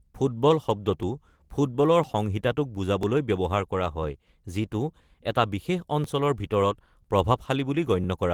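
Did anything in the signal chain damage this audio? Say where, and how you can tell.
Yes, at the driver or buffer stage: periodic USB or driver dropouts. Ticks recur about every 1.00 s from 1.03 s to 8.04 s, each where a couple of milliseconds of speech were skipped. The waveform shows evenly spaced discontinuities, and the spectrogram shows thin vertical broadband lines.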